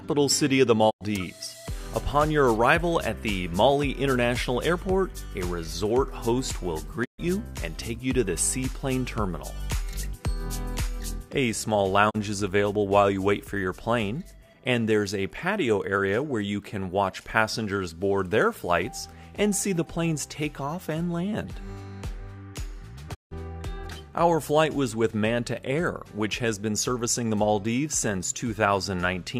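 Digital broadcast dropouts at 0.89–1.03 s, 7.04–7.20 s, 12.09–12.16 s and 23.13–23.33 s: the receiver lost valid frames and muted. Each gap fades out over 20 ms, goes silent for 32–160 ms (steps that fit 32 ms frames), then the audio resumes.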